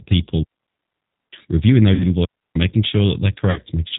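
Throughout, the speech carries plainly audible G.729 codec damage: a rough, synthetic texture and nothing above 4 kHz, consistent with 8 kbit/s G.729A coding. At 1.94–2.04 s and again at 3.51–3.60 s, VoIP packet loss concealed by the speech codec replaces about 60 ms and 50 ms with a fading extrapolation, a buzzy tone or coloured noise, leaving the sound weak or distorted briefly afterward.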